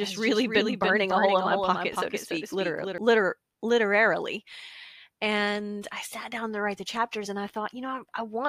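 Speech, with a doubled audio track from the start to 2.98 s. A second full-band copy trails roughly 300 ms behind at about 5 dB down, then cuts off abruptly, likely from a duplicated capture path.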